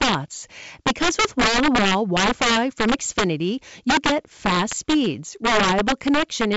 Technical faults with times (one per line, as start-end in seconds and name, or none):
0.00-6.56 integer overflow
1.41-1.44 loud pop
4.71-4.74 loud pop